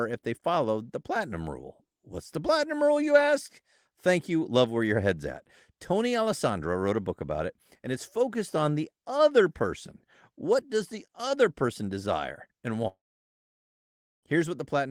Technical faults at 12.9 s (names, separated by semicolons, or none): long network dropout